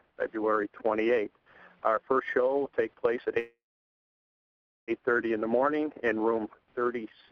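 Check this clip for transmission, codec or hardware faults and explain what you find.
One transmission fault is present, a call audio freeze. From 3.39 to 4.91 s, the last sound smears into a brief fading buzz or hiss, then about 1.3 s of silence. The likely cause is delayed packets emptying the jitter buffer. Playback then resumes where it stopped. Nothing is lost, but everything after arrives about 1.5 s late.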